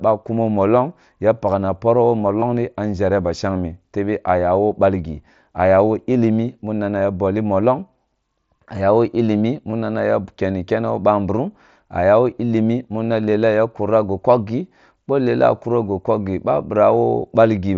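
Speech over a Bluetooth headset link, with concealed Bluetooth headset packet loss at 2.40 to 2.42 s, just after "ya pakna poroh woh", and at 8.56 s and 9.71 s. Each 15 to 22.5 ms gap was patched with a repeated slice of recent waveform, leaving a brief buzzy blip.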